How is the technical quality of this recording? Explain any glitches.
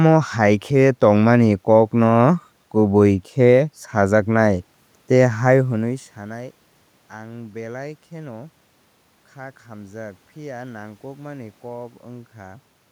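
The technical quality of this recording is good, with no glitches to explain.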